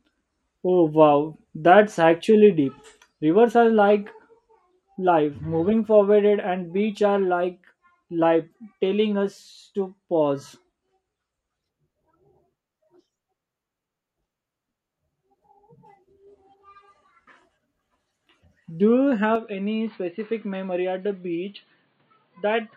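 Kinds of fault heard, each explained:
Input switched to a poorer device: from 19.36 s to the end the speech turns duller and boxier in an instant, with nothing above 4.6 kHz, a slight drop in level, and a faint new background noise sitting well below the voice, all with no gap at the change. This points to the recording having likely switched inputs mid-take to a lesser microphone or headset call mode, whose narrower band, own tone and own noise then carry the remaining audio.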